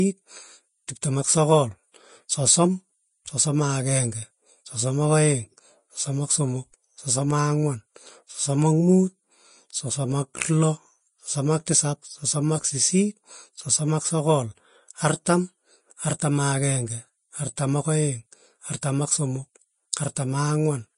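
Throughout the speech, the treble sounds hissy and grainy and stops near 10.6 kHz. That is likely low-bitrate Vorbis compression, consistent with roughly 30 kbps.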